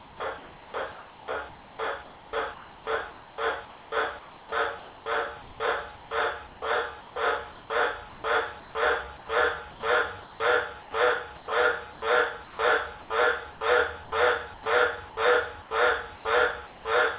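From 0.0 to 16.85 s the sound is repeatedly chopped. Stretches drop out and are filled with a flat, synthetic hiss. Around 5.8 s in total is replaced this way. The likely cause is sound chopped by the voice detector: the sender stopped and restarted transmission more than once, with comfort noise standing in for each gap. The band stops at 4 kHz, which fits a G.711 mu-law call path.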